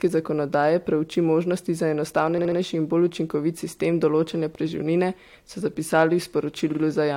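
At 2.37 s, just after "zakonodaje preuči možnosti za" and before "in bolj učinkovit sistem", repeated frames make the speech stutter: a 69.7 ms block plays three extra times through 2.58 s, adding 0.21 s. At 6.71 s a 46.4 ms block repeats twice more, to 6.81 s. Unlike a dropout, nothing goes missing. The same fragment recurs and the audio gets longer.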